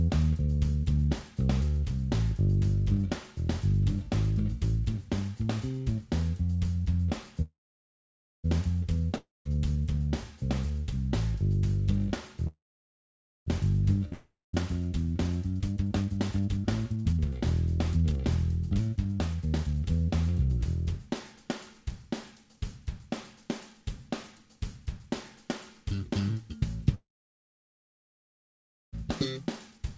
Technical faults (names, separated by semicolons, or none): call audio freeze; long network dropout; jitter buffer speed-up